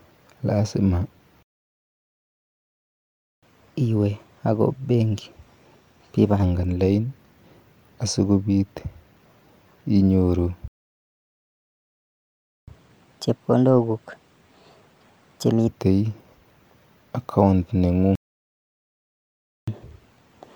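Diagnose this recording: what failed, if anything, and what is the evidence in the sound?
The speech drops out three times in a playback stall: from 1.43 to 3.43 s, from 10.68 to 12.68 s, and from 18.15 to 19.68 s. These are two-second gaps and one of about 1.5 s. It most likely comes from the player's buffer or playback thread running dry. Each dropout is a flat line on the waveform and a clean vertical band of nothing on the spectrogram.

Each stall is followed by catch-up at higher speed, as the player resamples its backlog to regain lost time. From 3.43 to 6.43 s the speech runs at 1.1 times normal speed, about a semitone and a half sharp. From 12.68 to 15.68 s it runs at 1.25 times, roughly four semitones up. From 19.68 s to the end it runs at 1.15 times, about two semitones high. On a spectrogram the harmonics shift upward and syllables compress.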